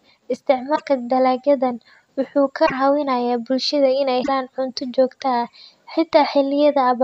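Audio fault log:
0.75–0.82 s, 2.65–2.72 s, 4.22–4.29 s, broken MP3 bit reservoir: three short 70 ms disruptions in the speech, one just before "dalagyadan wuxuu ka", one just after "dalagyadan wuxuu ka", and one just before "cunto joogto". In each, the speech lurches forward and the sound is briefly garbled. The likely cause is missing MP3 frames. The frames that follow each gap try to reuse bits stored in earlier frames, get the wrong data, and decode as garbage for about three 26 ms frames.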